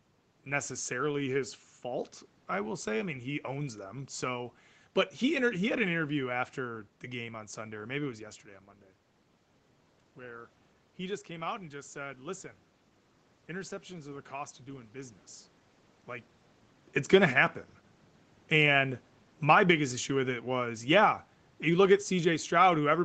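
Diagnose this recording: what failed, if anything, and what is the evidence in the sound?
The call's automatic gain control misjudged the level and began pulling its gain down from 16.98 s to the end of the clip at about 23 s. This is a call-processing fault. The speech then sinks steadily, with the room noise sinking alongside it. A talker moving around 16 s would change only the voice. Here the whole signal drops, so the gain stage is acting on everything at once.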